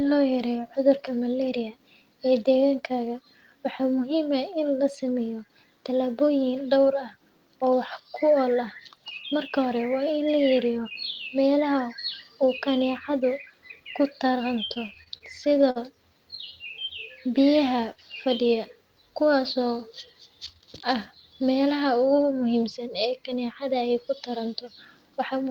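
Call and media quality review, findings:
Choppy, dragging speech 14.73–15.78 s: repeated stalls (stutter). Ten short gaps, longest 52 ms, 183 ms bridged in total, about 18% of the span. Packets arriving late or too slowly starved the jitter buffer, so the receiver extended the last sound each time.

Drawn-out, slightly slowed speech 17.27–17.82 s, just before "fadiya kuwas": jitter buffer slow-down. Playback at 91% speed, pitch unchanged, 53 ms added. The receiver repeated single pitch periods or pause fragments to refill a low buffer.

Hurried speech 20.13–20.63 s, just before "ahh melaha": jitter buffer speed-up. Playback at 107% speed, pitch unchanged, about 50 ms cut. The buffer held excess audio, likely after bunched late packets, so the receiver dropped short pitch-period pieces to reduce delay.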